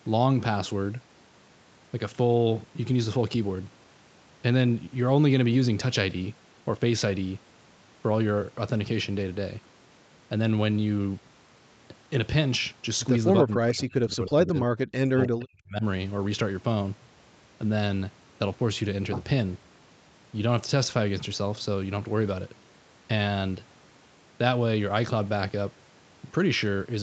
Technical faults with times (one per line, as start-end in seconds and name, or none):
13.44-14.73 speech suppressed in double talk
15.11-15.84 speech suppressed in double talk